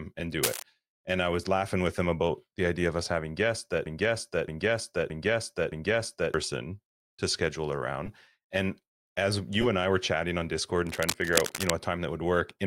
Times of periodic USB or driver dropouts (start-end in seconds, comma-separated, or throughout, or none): none